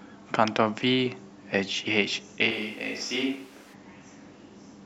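From 2.53 to 3.72 s, the close microphone likely dropped out and a distant one took over, a switch to a distant microphone. The speech abruptly turns roomy and hollow, thinner in the bass, a few decibels quieter, with room noise rising to roughly 25 dB below the speech, before snapping back.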